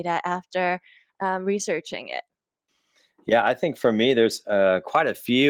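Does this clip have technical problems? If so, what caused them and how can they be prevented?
No, nothing in this recording needs fixing.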